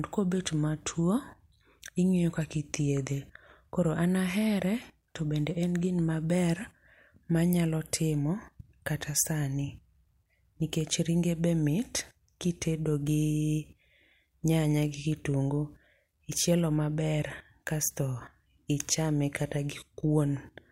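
No technical faults can be heard anywhere in the speech recording; the signal holds steady throughout.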